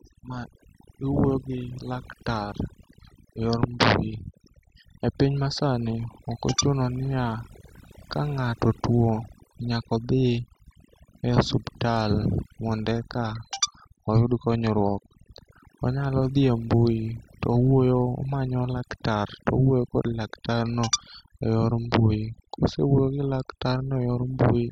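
Throughout the speech, overdone noise removal switches frequency bands off, leaving twinkling specks over near silence, unlike a gate's whole-signal cuts.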